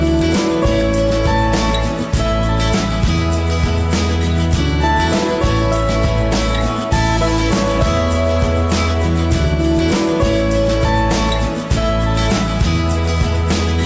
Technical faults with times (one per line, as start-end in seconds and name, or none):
none